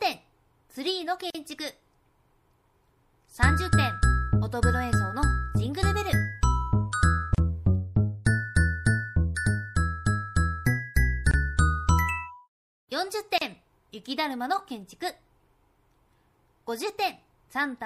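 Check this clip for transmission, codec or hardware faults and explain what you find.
Two problems turn up: codec damage throughout and three short dropouts at joins.

Throughout, there's a watery, swirly quality with smeared attacks, likely MP3 compression at a low bitrate, plausibly around 64 kbps. Short of bits, the encoder trims the treble and lets weak frequency components flicker on and off between frames.

At 1.30 to 1.35 s, 7.35 to 7.38 s and 13.38 to 13.41 s, spaced about 6 s apart, you get a gap at a join of encoded pieces. The first gap lasts about 43 ms and the other two about 34 ms, each with smeared edges before the sound resumes where it stopped. The segments were encoded separately and stitched together untrimmed, so encoder start-up delay and end-of-frame padding remain.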